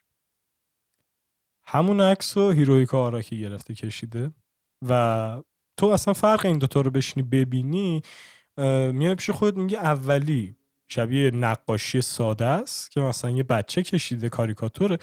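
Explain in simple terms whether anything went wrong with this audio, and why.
Nothing went wrong: the speech recording reaches the listener as a steady, intact signal, with no technical fault anywhere in it.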